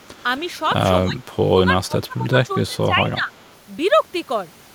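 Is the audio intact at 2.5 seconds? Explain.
No. Speech suppressed in double talk runs from 1.55 to 3.33 s, likely because an echo canceller couldn't tell its own talker from loudspeaker echo while both sides spoke, so it pulled everything down. The speech dips by around 20 dB and thins out or drops in pieces.

An echo leak also sits at 2.50 to 2.54 s. This is a faint copy of the speech arriving 270 ms late, very quiet at around 40 dB below the speech. It is likely residue that a far-end echo canceller failed to remove from its microphone pickup.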